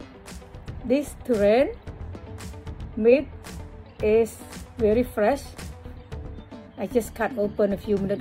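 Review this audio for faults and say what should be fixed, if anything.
Nothing stood out on listening, so there is nothing here that needs fixing.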